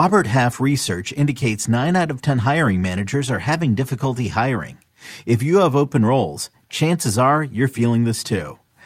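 Nothing stood out as a technical fault on listening to this speech recording.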